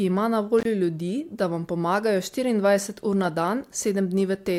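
From 0.59 to 0.65 s an intermittent contact briefly opens the line for about 49 ms. The speech cuts out with crackle at both edges and faint hiss between them, unlike a digital dropout's clean silence.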